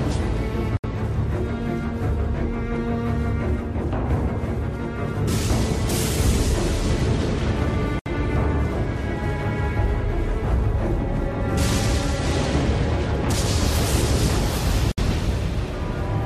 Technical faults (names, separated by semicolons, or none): gap at a join of encoded pieces